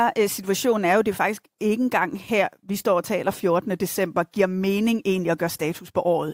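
No faults are audible anywhere in the recording.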